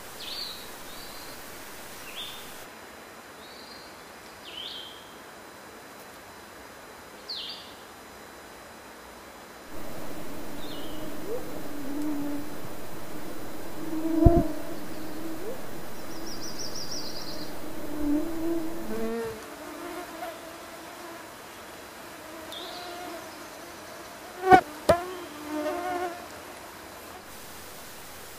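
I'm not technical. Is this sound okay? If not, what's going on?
No, there is a problem. A thin, steady whine runs under the sound for the whole clip. This is USB whine. A USB connection draws power in quick bursts, a thousand times a second. That rhythm leaks into the audio through the power or ground wiring. Here it gives a fixed tone at 1 kHz, and it is loudest at 4 kHz, a higher harmonic of it. It stays fairly faint beneath the sound, but it never stops.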